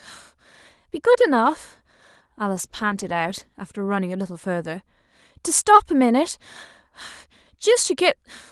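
From 2.54 s to 3.67 s the speech turns coarse and watery during a call bitrate drop: the Opus encoder was starved of bits after its bandwidth estimate fell, which fits a fall from 40 kbps to about 15 kbps, held at its lowest for roughly 1.05 s before the 12 kHz call band returns.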